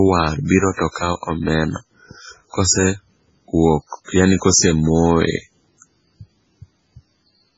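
Throughout the speech, the treble stops dead near 7.7 kHz and what remains sounds watery and swirly, with metallic chirps on s sounds, likely from heavy MP3 compression at a very low rate, near 16 kbps. Unlike a simple low-pass filter, weak detail flickers in and out.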